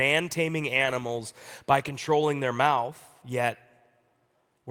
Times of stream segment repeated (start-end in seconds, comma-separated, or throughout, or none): none